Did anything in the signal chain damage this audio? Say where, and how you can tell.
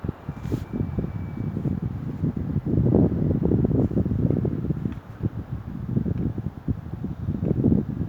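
No, nothing in the signal chain stood out as damaging these sounds on listening.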